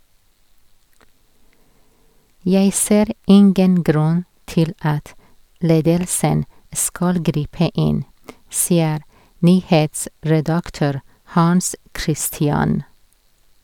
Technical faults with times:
none

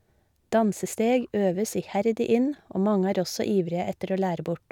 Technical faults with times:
none

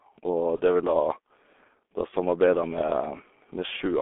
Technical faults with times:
0.00-4.01 G.723.1 codec
0.57-0.62 VoIP packet loss concealed by the speech codec

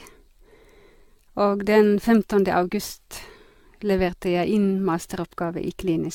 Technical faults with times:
0.00-6.14 generation loss

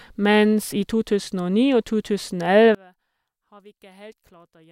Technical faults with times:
2.75-4.71 one channel inverted

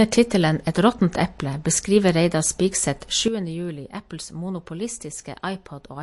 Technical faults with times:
0.00-6.03 MP3 compression
3.28-6.03 sudden gain jump

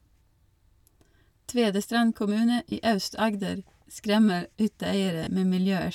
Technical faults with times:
2.69-2.72 lost LE Audio frames
5.24-5.27 lost LE Audio frames

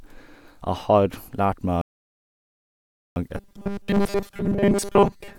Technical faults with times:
1.81-3.16 rebuffering stall
3.37-5.38 robotic sound from repeated short buffers

